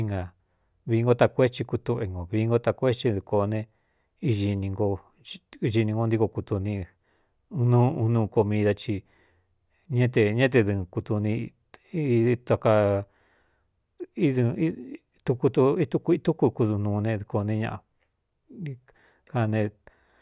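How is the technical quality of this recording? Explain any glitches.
No technical faults are audible.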